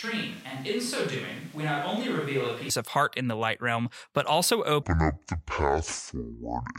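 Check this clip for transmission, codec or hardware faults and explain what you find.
Two faults are present.

From the start until 2.7 s, just before "of heart in the", the sound is hollow and roomy, about 5 dB quieter, with room noise about 25 dB below the speech. This is a switch to a distant microphone, likely because the close microphone's signal was missing. The abrupt return to close sound at 2.7 s distinguishes it from added reverb.

From 4.83 s to the end, after "light realm but also", a section plays at the wrong speed, 0.56 times normal. Pitch falls about 10 semitones and the pace slows with it. Because tempo and pitch drop together, this is a speed error rather than pitch shifting alone, likely from playback against the wrong clock.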